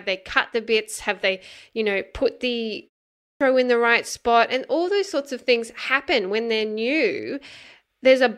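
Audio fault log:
3.15–3.41 s: clipped start after a pause. After a 0.34 s gap the output wakes late and swallows 0.26 s, so speech jumps in missing its first sounds.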